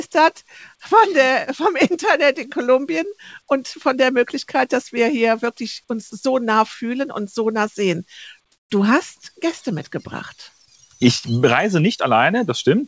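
At 6.10 to 6.12 s, a brief stretch of the sound is replaced by flat, steady noise for 20 ms, with about 10 ms of real sound lost. This is likely sound dropped by the voice detector: the sender misjudged the sound as background, stopped transmitting, and the receiver filled in comfort noise. Unlike a packet-loss gap, there is no click or repeated fragment, only a smooth featureless patch.

From 8.52 to 8.70 s, the background, sitting about 54 dB below the loudest parts, is swapped for comfort noise in place of the background for 180 ms, likely because the sender paused transmission during silence. The level stays the same, so it is not a gate or dropout, but the texture of the real background gives way to bland synthetic hiss, audible within the G.722 band that stops at 8 kHz.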